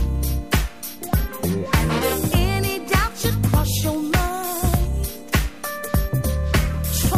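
A faint buzzing chirp, pulsing at around 500 times a second and roughly 30 dB below the sound, runs through the whole clip. This is computer activity noise: processor, graphics or mouse load swings disturb the ground the audio circuit shares.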